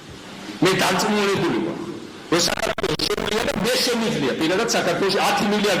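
From 2.49 to 3.61 s a gritty burst of crackle tears through the audio. This is processor overload crackle: dozens of roughly 10 ms buffers missed their deadlines and dropped to silence. At 2.73 s a 49 ms gap with smeared edges opens, then the sound resumes where it stopped. This is a gap at a join of encoded pieces, where untrimmed encoder delay and padding remained.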